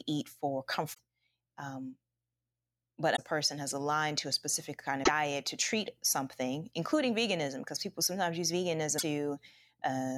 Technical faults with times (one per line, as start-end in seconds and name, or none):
0.90-0.99 damaged data in a compressed stream
3.12-3.19 damaged data in a compressed stream
5.00-5.09 damaged data in a compressed stream
8.95-9.03 damaged data in a compressed stream